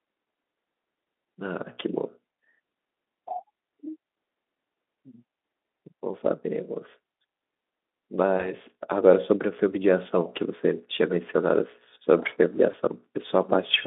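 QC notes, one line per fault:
8.38 to 8.53 s and 12.71 to 12.75 s, VoIP packet loss concealed by the speech codec: the sound smears briefly into a buzzy, fading tone, then recovers weakly. Each gap fits a single lost 20 ms frame, which the decoder filled by extending its last pitch and filter, carrying errors into the following frames.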